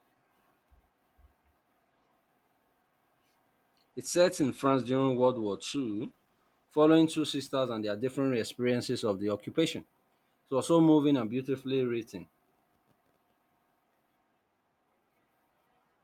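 From 3.92 s to 8.33 s the speech goes through a call bitrate drop. The call's bandwidth estimate fell, so the Opus encoder was given far fewer bits, which fits a fall from about 48 to 15 kbps. The top end narrows from 20 kHz to 12 kHz and the sound turns coarse and watery, worst for about 2.85 s, before clarity returns ahead of "experiences of the occupation". Unlike packet loss, there are no gaps or glitches, only degradation.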